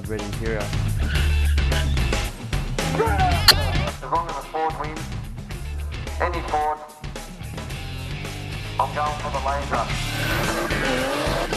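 At 3.48 to 3.54 s and again at 9.71 to 9.75 s, a corrupt frame decoded: damaged bits in the compressed stream were played anyway, so misread gains or codes put energy at the wrong frequencies. Each burst lasts about the length of a few codec frames, roughly three and then two. Unlike a plain dropout or a single click, it adds out-of-place tonal or noisy content lasting tens of milliseconds. The first burst is the louder of the two.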